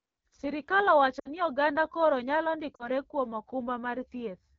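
Throughout, the speech carries the AMR wideband (HD Voice) codec at 8.85 kbit/s, one of its lowest rates. The pulse-excited vocal tract model cannot track the voice closely at this rate, so it sounds rough and raspy, and the top band above 6.4 kHz is synthetic noise.

From 1.19 to 1.30 s, lost AMR speech frames leave a gap of about 60 ms, consistent with three consecutive frames. The decoder repeats the last good pitch and vocal tract settings at falling gain, so the sound smears briefly and sinks away. It then returns weak and rough. At 2.75 to 2.88 s a shorter loss of about 40 ms, fitting two frames, gives a briefer warble and dip of the same kind.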